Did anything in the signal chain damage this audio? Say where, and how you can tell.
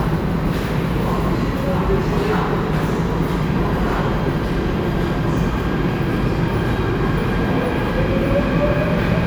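No, nothing along the chain from capture to playback has left an audible mark on this recording of sounds, and the signal holds steady and continuous at every stage I can hear.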